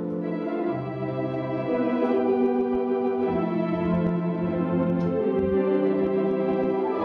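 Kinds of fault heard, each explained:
No technical faults are audible anywhere in the recording.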